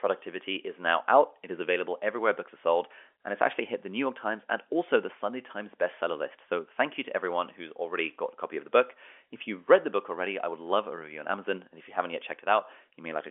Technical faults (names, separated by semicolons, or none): none